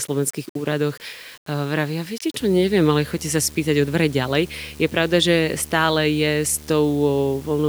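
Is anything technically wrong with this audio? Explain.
Yes, two faults are audible.

Low bit depth without dither runs throughout. The speech was likely rounded to about 7 bits with no dither, so the error tracks the signal: quiet syllables turn gritty and grainy, with distortion about 25 dB below the speech that shifts as the voice changes.

Video or display buzz starts at 2.40 s, right after "úradoch e vravia viete", and lasts to the end. A screen or video cable is coupling into the audio path, adding a 75 Hz buzz at the picture's field rate with hash above it, roughly 20 dB below the speech.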